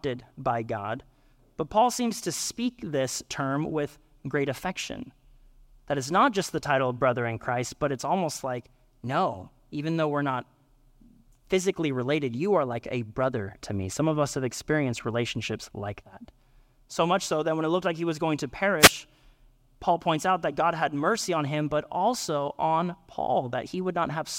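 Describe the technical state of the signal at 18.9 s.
The analogue FM radio link faded as reflections cancelled, a wireless microphone noise hit from 18.79 to 18.92 s, after "he was going to", bringing a brief swish of static over the speech.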